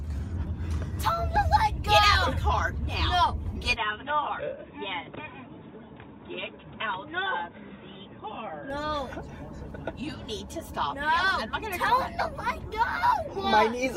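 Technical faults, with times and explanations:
3.76 to 8.70 s, input likely switched to a poorer device: the sound turns dull and boxy with nothing above 3.8 kHz, drops roughly 5 dB, and carries new background noise about 35 dB down. It differs from a simple filter because level, tone and noise floor change together, with no gap either way.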